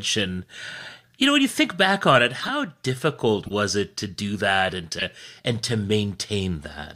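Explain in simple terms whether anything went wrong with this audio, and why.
There are three corrupt frame decoded glitches in this speech: damaged compressed chunks got played anyway, so you hear brief squeaky bursts at 2.40–2.50 s after "think back on it", 3.45–3.51 s before "it to do that", and 4.99–5.03 s after "to do that and".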